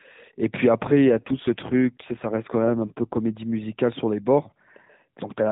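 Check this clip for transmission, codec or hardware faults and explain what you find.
One transmission fault is present. It sits on a narrowband mobile speech path with light codec damage. From 0.84 to 3.18 s there is an AMR rate drop. The codec falls back to fewer bits, and the sound fits a change from 12.2 to 5.9 kbps, freeing capacity for error protection. The bandwidth holds and nothing cuts out. The speech just turns buzzier and more synthetic until the rate recovers.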